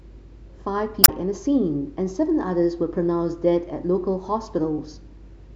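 At 1.01 to 1.09 s the speech breaks into a brief glitch from damaged data in the compressed stream; the decoder loses frame sync and resynchronises on the next header.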